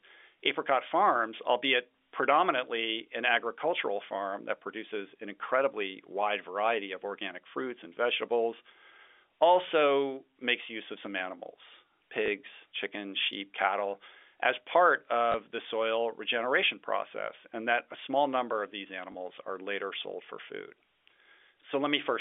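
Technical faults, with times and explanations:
12.26 s, 15.32 s and 19.12 s: packet loss with last packet repeated. Each gap lasts 20 ms, pointing to a single lost packet, and falls after "use of some animals", "sheep cattle as part" and "small number of these". The receiver fills the hole by replaying the previous 20 ms. That segment seldom aligns with the pitch cycle, and each single repeat gives a small blip within the narrow telephone band.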